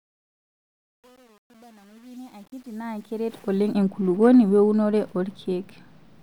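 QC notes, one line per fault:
0.0–3.74 s, truncation distortion on a fade: the fade-in up to "enkulukuoni weunore" gets there, but its quiet early part is gritty, worst from 0.0 to 3.14 s. The gain stage is dropping low bits with no dither, which fits roughly 9-bit resolution. At low levels the waveform collapses into a few coarse square steps, so you hear that grainy texture instead of a clean rise.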